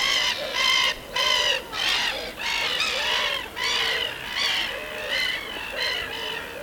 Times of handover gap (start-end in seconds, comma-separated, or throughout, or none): none